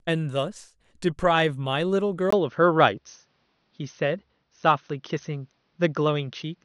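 An input switched to a poorer device at 2.30 s, in this speech recording, most likely the system changing to another microphone or a headset's call profile, holds to the end. A gap of about 20 ms marks the switch. After it, nothing reaches above 6.3 kHz, so the sound turns duller and boxier, the level shifts by roughly 5 dB, and a new noise floor appears roughly 50 dB below the signal.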